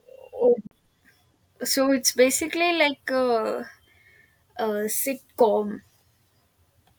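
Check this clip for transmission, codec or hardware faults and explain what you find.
One fault stands out in the speech: a brief gap from 0.67 to 0.71 s, where the audio cuts to silence for about 40 ms and then carries on further along, as though it had kept playing underneath. The likely cause is a Bluetooth dropout. Audio packets reached the headphones too late and were discarded, and the output stayed silent until valid data arrived. The gap's length fits roughly two lost packets.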